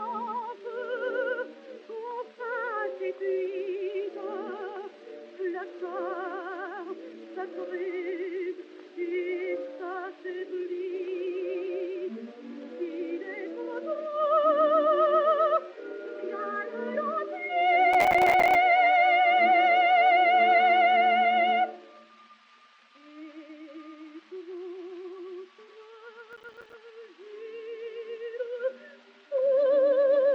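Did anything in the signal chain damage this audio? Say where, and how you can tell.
Yes. Processor overload crackle at the driver buffer stage, 17.93–18.55 s and 26.33–26.74 s: gritty bursts of roughly 5 ms silent gaps as buffer deadlines were repeatedly missed.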